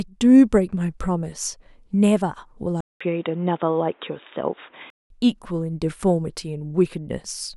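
At 2.81 s the speech drops out for 200 ms, then returns dull and boxy, with nothing above 3.8 kHz and a faint new background noise, at much the same level, until 5.10 s. The likely cause is an input switched to a poorer device with a narrower band.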